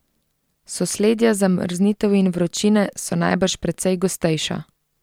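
No technical faults can be heard anywhere in the speech. Nothing in the recording calls for a time stamp or a fault name.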